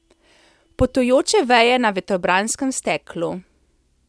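Speech, with no audible technical faults anywhere.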